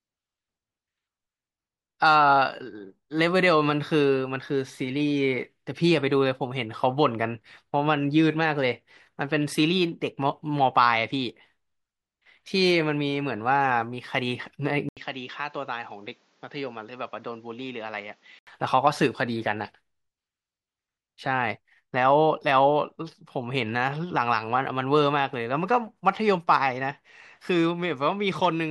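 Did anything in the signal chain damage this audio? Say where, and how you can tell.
Yes. An input switched to a poorer device between 14.89 and 18.47 s, most likely at the driver or device-selection stage. The speech is cut by a brief 80 ms silence, then returns roughly 10 dB quieter, with nothing above 7.6 kHz and a new noise floor around 35 dB below the signal. That narrower band, different level and fresh background noise all mark a different microphone or profile taking over until the original input resumes at 18.47 s.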